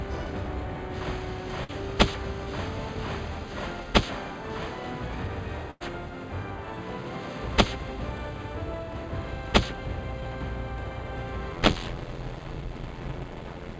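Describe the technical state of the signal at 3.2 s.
At 3.2 s the signal is intact, with nothing heard there beyond the ordinary character of the call codec path, whose content stops at about 8 kHz.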